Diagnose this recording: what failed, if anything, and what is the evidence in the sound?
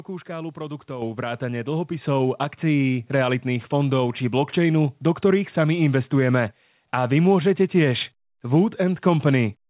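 The microphone volume stepped up twice, a call-processing fault. Speech and background jump together by about 7 dB at 1.02 s, then about 4 dB more at 2.04 s, just before "akcií realitných fondov či". The call software raised the device's input gain in single steps.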